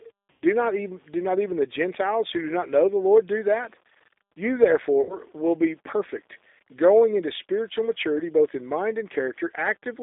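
Speech heard through a G.729 codec, with the line held to roughly 300 Hz to 3.7 kHz and a rough, slightly synthetic texture that fits an 8 kbit/s G.729A stream. The roughness is unlike plain band-limiting because the voice is rebuilt from a filter, pitch predictor and sparse pulses rather than simply filtered. Two bursts of VoIP packet loss concealed by the speech codec occur, at 0.31 to 0.43 s just before "not even do not" and at 5.01 to 5.17 s just before "will be perfect growing". In each, the decoder stretches the last sound into a fading buzzy tone or coloured noise rather than leaving silence or a click, and the voice stays weak for a moment after the gap.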